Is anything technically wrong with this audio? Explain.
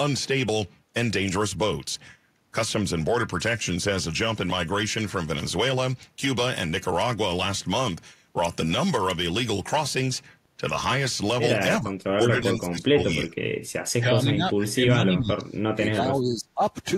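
Yes. From 11.8 to 13.52 s and 13.98 to 16.61 s, the speech drops by around 30 dB, likely speech suppressed in double talk, where an echo canceller cannot separate the local talker from the loudspeaker echo and turns both down.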